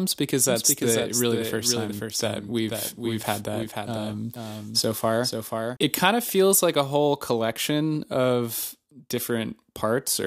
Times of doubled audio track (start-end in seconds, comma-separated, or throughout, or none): 0.49-5.77